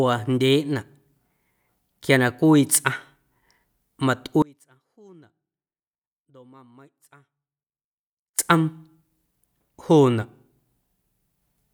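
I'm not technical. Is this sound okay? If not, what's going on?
No. At 4.42 seconds the speech suddenly drops away and stays gone until 8.39 seconds, about four seconds. Only a very faint trace remains in the gap. This is an audio dropout to a faint residue, likely from the signal being lost while the recording line stayed open.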